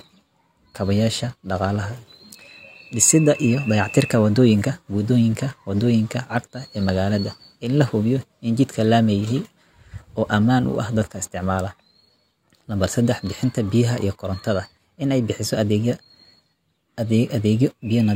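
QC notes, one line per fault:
No faults found on listening. Nothing calls for a note on any part of the clip.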